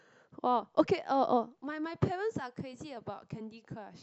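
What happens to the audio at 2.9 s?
A drift correction step runs from 2.41 to 2.97 s: the speech plays about 5.2% fast and rises roughly 88 cents, nearly a semitone, then snaps back at 2.97 s. The likely cause is clock-matching software briefly changing the playback rate to rebalance its buffer.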